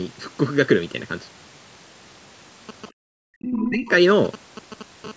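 Throughout the speech, one channel runs late by under a millisecond before the two are summed to mono. This is channel delay (comb filtering). Shared sound cancels at evenly spaced frequencies, the first near 700 Hz. The voice sounds hollow and phasey.

From 2.69 to 5.06 s, GSM signalling bursts come through. A nearby 2G phone is sending short groups of radio bursts, repeating at 216.7 Hz, and the audio circuit rectifies them. The result is a galloping dit-dit-dit of short 217 Hz buzzes, about 15 dB below the speech.

At 2.91 to 2.96 s, and again from 3.15 to 3.88 s, the voice drops sharply, by something like 40 dB at its deepest. The likely cause is speech suppressed in double talk. The echo canceller could not tell the talker from the loudspeaker echo, so it turned both down.

Between 3.47 and 3.70 s, a second voice is heard, around 10 dB under the talker. This is likely the other side's voice leaking through. 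It comes from the loudspeaker and was not fully cancelled at the microphone.

From 5.07 to 5.12 s, the bursts become steady GSM phone buzz. The phone is now transmitting in bursts 216.7 times a second, and the rectified pulses give a hard, harmonic-rich rasp about 15 dB below the signal, unrelated to the speech.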